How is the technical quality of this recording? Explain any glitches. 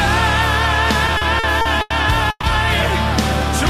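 Two network glitches stand out, both in the middle of the clip.

From 1.07 to 1.92 s there's repeated stalling (stutter). Packets kept arriving late, so the jitter buffer ran dry six times, the longest for 90 ms. The receiver stretched the last sound to cover about 230 ms, roughly a quarter of that stretch. Nothing's lost, but it drags and hiccups.

Then at 2.30 to 2.45 s there's a call audio freeze. The sound hangs and fades for about 130 ms, ending in 30 ms of silence, then picks up exactly where it stopped, now running 130 ms later. The likely cause is packets held up in transit emptying the buffer.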